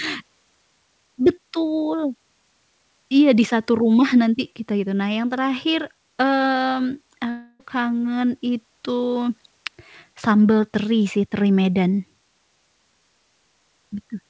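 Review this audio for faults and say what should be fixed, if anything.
At 7.30 s the speech smears into a fading buzz until 7.61 s, likely a long network dropout: about 300 ms never arrived, and the receiver papered over roughly 295 ms of it by extending the last sound, leaving just 10 ms of silence. Underneath, the G.722 call path stops at 8 kHz. A steadier network route, or adding forward error correction, would keep gaps like this from opening.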